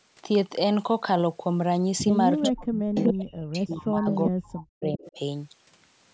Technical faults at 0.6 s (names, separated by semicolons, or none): none